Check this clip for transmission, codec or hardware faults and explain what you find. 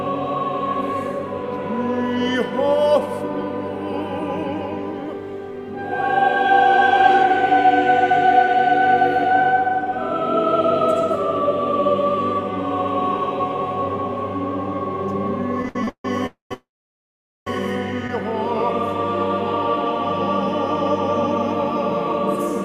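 Yes, there are transmission faults: a run of network stalls clustered between about 15.6 and 18.1 s, in three kinds.

Repeated stalls (stutter), 15.62 to 16.05 s: the receiver's jitter buffer ran dry five times in quick succession because packets arrived late or too slowly. Each time it extended the last sound to cover the wait, 259 ms in total, with the longest hold 151 ms. About 60% of that span is filled-in sound, so the audio drags and judders, though nothing is lost. Unlike a single freeze, it is a chain of short holds, not one long hole.

Call audio freeze, 16.26 to 16.52 s and 16.54 to 17.47 s: the last sound is carried on as a fading buzz or hiss, then the audio resumes where it left off, most likely because packets were held up in transit and the buffer emptied. The first hold lasts 243 ms, about 140 ms of it silent. The second lasts 928 ms, with about 810 ms of silence after the carried-over sound fades. 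Nothing is missing; a gap has been inserted instead. What separates these from the stutter is length. Each is one long, mostly silent pause, not a string of brief held sounds.

Short stall from a late packet, 18.07 to 18.10 s: a single packet missed its slot, so the receiver stretched the preceding sound by 16 ms until the packet arrived, then carried on. It is heard as a sound held a touch too long, with a faint buzz or dip. It is far shorter than a freeze, with no silence, and it is an isolated event, unlike the clustered stutter.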